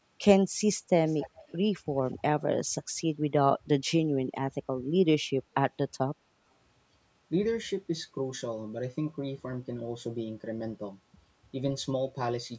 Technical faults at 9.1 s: none

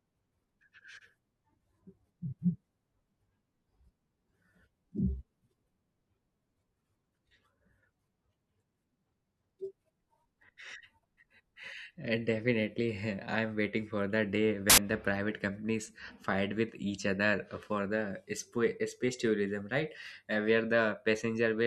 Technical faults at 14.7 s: samples built from the wrong bytes

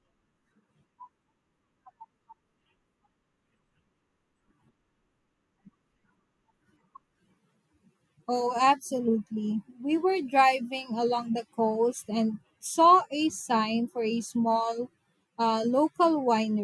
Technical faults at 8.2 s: none

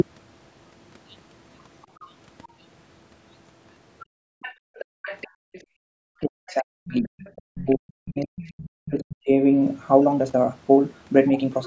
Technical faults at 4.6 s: other side's voice leaking through; background gated by the echo canceller

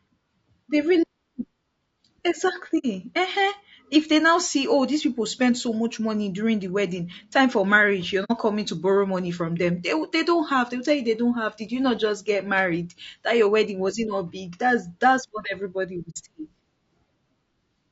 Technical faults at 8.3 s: low-delay AAC compression; AAC frame loss with muting

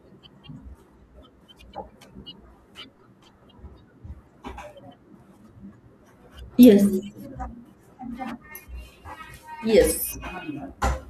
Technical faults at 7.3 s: none

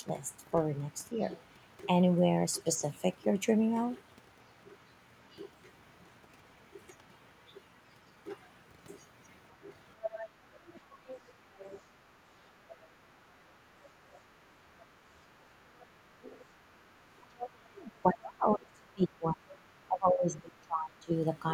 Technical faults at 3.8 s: none

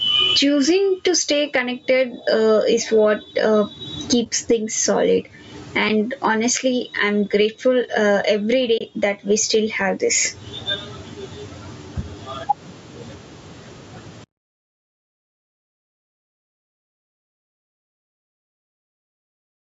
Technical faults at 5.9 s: gain pumping; AAC frame loss with muting

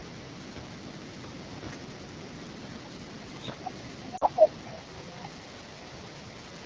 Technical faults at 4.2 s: AMR wideband (HD Voice) codec; lost AMR speech frames

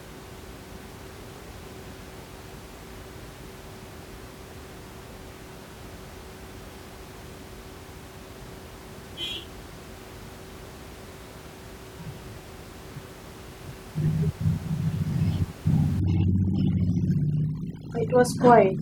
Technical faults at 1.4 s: none

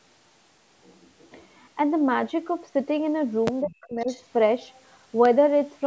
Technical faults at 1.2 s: none

